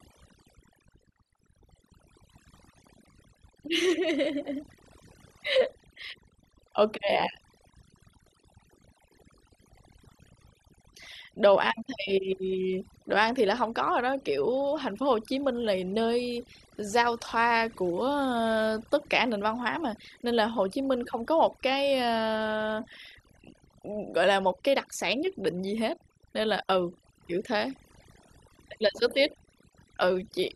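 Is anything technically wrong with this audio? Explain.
Yes, there's overdone noise removal running through the whole speech clip, start to finish. The noise reducer was pushed too hard, so any frequency band sitting close to what it thinks is noise gets pulled way down or shut off entirely, and the softer parts of the voice get caught along with it. You hear it as a background that drops away and breaks up into little twinkling specks.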